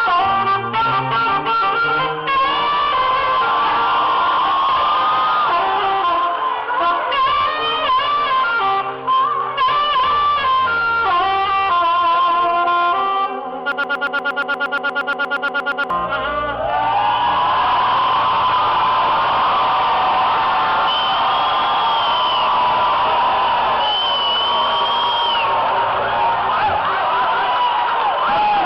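At 13.72 s the audio locks into a broken-record loop: a fragment of about 0.12 s plays 19 times back to back until 15.90 s, and the sound that belonged in those two seconds never arrives. The likely cause is a stalled player, encoder or stream resending the last piece it held. Unlike an echo or reverb tail, each repeat is identical and undecayed, and unlike a dropout there is no gap, only the same chunk cycling.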